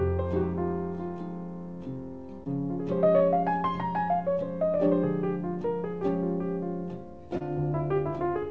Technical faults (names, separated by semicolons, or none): short concealed packet loss